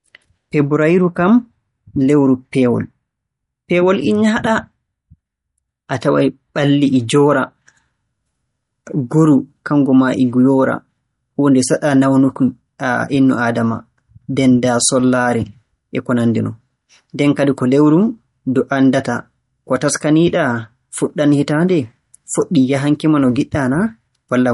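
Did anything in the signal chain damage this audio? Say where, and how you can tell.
Yes. The speech carries MP3 compression damage throughout, likely from a low-bitrate codec stage around 48 kbps. Nothing survives above roughly 11.2 kHz, where the encoder cut the treble to save bits. Weak frequency lines flicker between frames, giving a watery, swirly texture and metallic chirps on s sounds.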